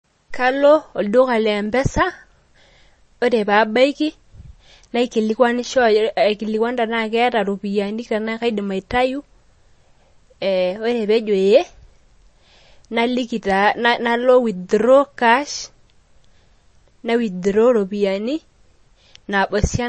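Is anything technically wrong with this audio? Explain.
Yes. Throughout the speech there is a watery, swirling quality, the s sounds turn metallic and chirpy, and sharp onsets smear, with nothing at all above 8.3 kHz. This is most likely MP3 compression at a starved bitrate, which fits something as low as 32 kbps. Short of bits, the encoder cuts the treble at a fixed point and discards weaker frequency components, which then flicker on and off between frames and make the damage plainly audible.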